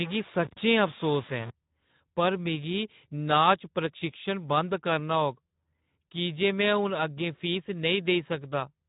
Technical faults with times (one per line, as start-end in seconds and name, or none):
0.00-8.89 Speex codec
0.00-1.50 low bit depth without dither